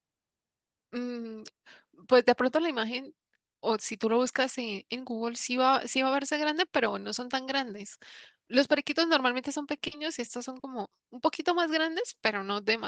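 At 9.87 s and 10.59 s, short concealed packet loss replaces about 40 ms of speech with extrapolated audio, heard as a brief smear before the signal resumes.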